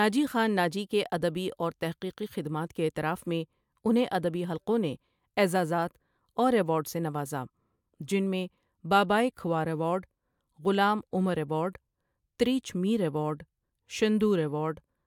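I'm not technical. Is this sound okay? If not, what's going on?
Yes, nothing wrong can be heard in this recording.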